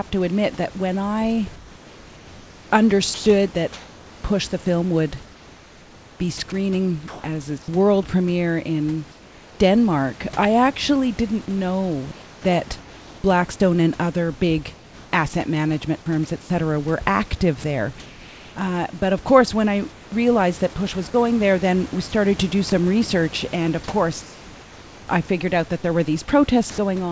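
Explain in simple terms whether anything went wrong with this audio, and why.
Sound chopped by the voice detector, at 3.14 to 7.24 s, 16.42 to 17.64 s and 19.92 to 22.72 s: the sender's voice detector likely kept switching transmission on and off. Quiet syllables and word edges get swapped for artificial hiss, so the speech sounds choppy.

Comfort noise in place of the background, at 9.12 to 9.60 s, 12.12 to 13.24 s, 14.74 to 15.12 s and 24.22 to 25.08 s: the sender likely stopped sending during pauses, and the receiver filled the gaps with smooth synthetic hiss. It is flatter than the real room background it replaces, and slightly quieter in most of these pauses.

Sound dropped by the voice detector, at 26.7 s: the detector likely mistook a quiet bit of speech for background and stopped sending. A brief fragment of the voice disappears under steady noise for a moment before the speech comes back.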